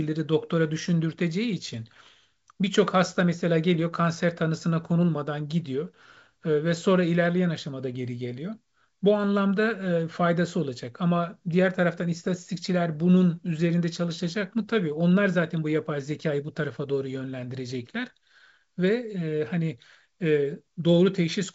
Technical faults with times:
none

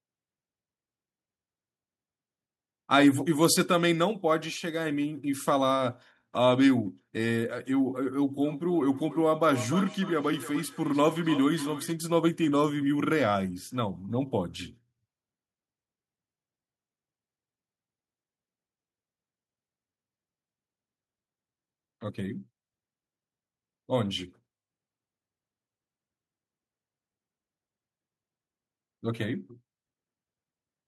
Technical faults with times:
8.42-11.98 feedback echo between two devices

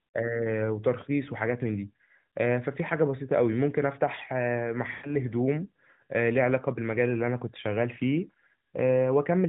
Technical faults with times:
4.92-5.14 lost AMR speech frames

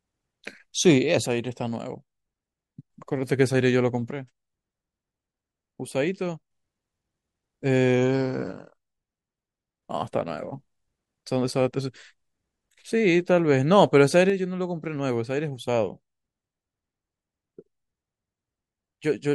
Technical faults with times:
1.26-2.90 one channel drops out
4.11-6.51 one channel drops out
8.52-9.83 one channel drops out
14.30-19.34 one channel drops out

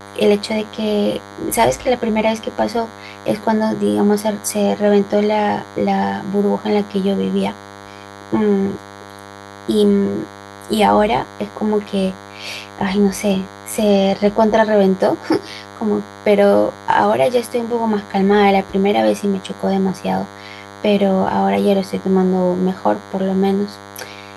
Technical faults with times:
0.00-24.37 DECT cordless phone buzz

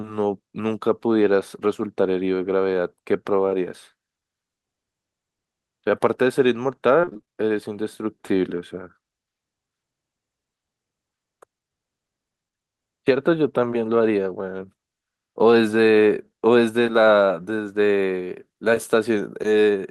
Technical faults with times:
7.01-7.29 repeated packet loss (robotic sound)

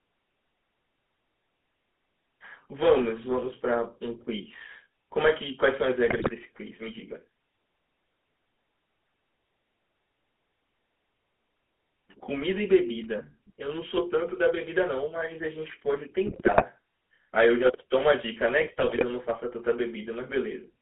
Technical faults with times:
0.00-20.81 GSM full-rate codec
6.06-6.31 GSM bit errors
16.26-16.65 GSM bit errors
18.60-19.04 GSM bit errors

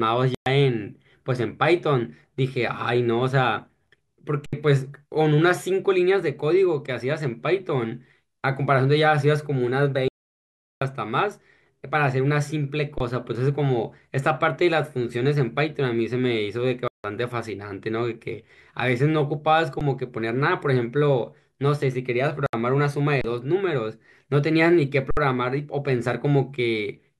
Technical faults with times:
0.35-0.46 Bluetooth dropout
4.46-4.53 underrun with held sample
10.08-10.81 audio dropout to silence
12.98-13.00 underrun with held sample
16.88-17.04 Bluetooth dropout
19.80 underrun with held sample
22.46-22.53 Bluetooth dropout
23.21-23.24 underrun with held sample
25.11-25.17 underrun with held sample

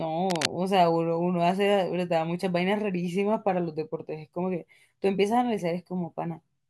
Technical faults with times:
0.30-0.48 cable scratch noise

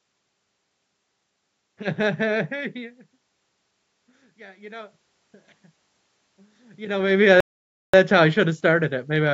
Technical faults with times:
6.36-7.24 automatic gain rising
7.40-7.94 playback stall

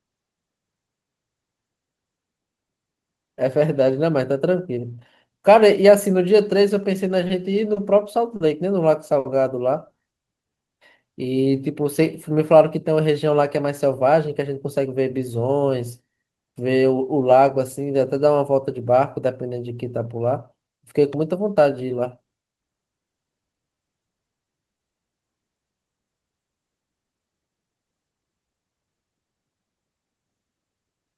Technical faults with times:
7.27-9.27 repeated stalls (stutter)
10.50-11.51 jitter buffer slow-down
13.51-15.11 jitter buffer speed-up
22.25-22.33 short stall from a late packet
23.24-24.78 jitter buffer slow-down

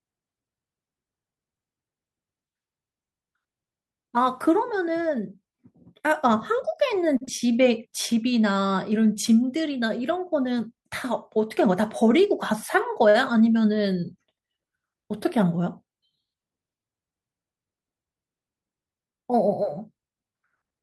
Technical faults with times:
7.17-7.23 short stall from a late packet
7.25-7.29 short concealed packet loss
11.66-12.52 jitter buffer speed-up
13.09-13.16 short stall from a late packet

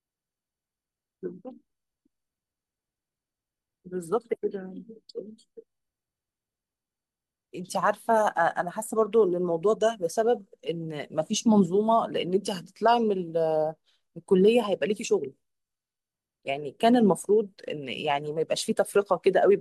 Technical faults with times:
none

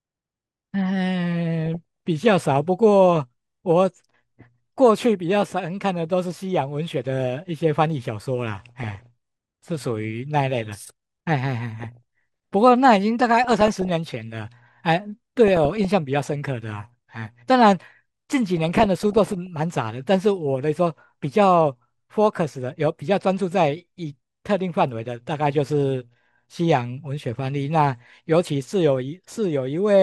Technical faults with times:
0.00-30.02 MP2 compression
1.66-1.76 DAB burbling
8.54-9.06 DAB burbling
11.80-12.53 DAB burbling
13.44-13.89 DAB burbling
15.48-15.85 DAB burbling
18.57-19.47 DAB burbling

